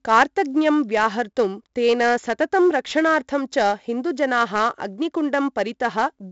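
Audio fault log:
throughout: 4-bit ADPCM compression. Each sample is stored as a 4-bit step from a prediction, so heavy gritty hiss rides on loud syllables and attacks distort. A spectrogram shows broadband noise tracking speech level and nothing above 7.8 kHz, fitting 16 kHz sampling.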